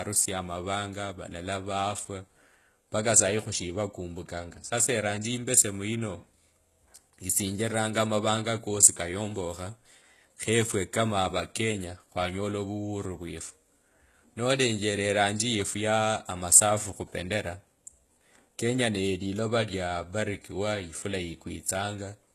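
HE-AAC compression runs throughout this speech, and the treble was likely rebuilt by spectral band replication rather than coded, since the coder kept only the lower band and copied it upward. Damage is heavy, fitting roughly 16 kbps, with s sounds turning gritty and metallic and nothing above 12.3 kHz.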